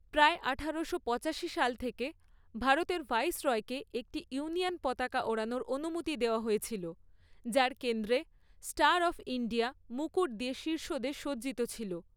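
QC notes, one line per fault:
No faults heard anywhere in the speech.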